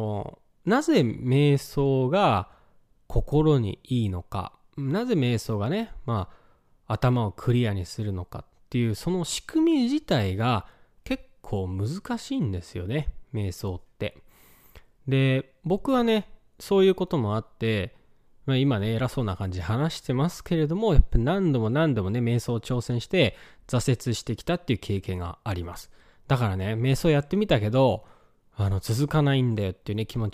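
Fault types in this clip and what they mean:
Nothing stood out on listening to this speech recording.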